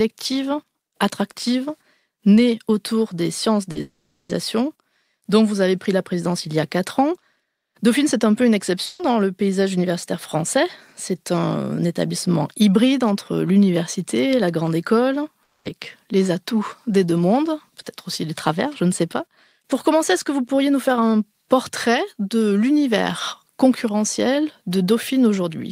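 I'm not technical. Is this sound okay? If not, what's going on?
No. Short concealed packet loss at 3.71 to 3.77 s: a few hundredths of a second never arrived in time, so the player covered the gap by briefly continuing the last sound. You hear a quick smear or wobble.

Long network dropout at 3.81 to 4.31 s and 15.43 to 15.67 s: the sound stretches into a fading buzz or hiss for about half a second the first time and about a quarter second the second time. It then picks up further along with that part missing, likely because the connection stopped delivering audio.

Burst of packet loss at 8.85 to 9.01 s: a run of about 140 ms of audio was lost or arrived too late to play. The last sound was held and faded, so there is a brief buzz or hiss, and the sound jumps ahead afterwards.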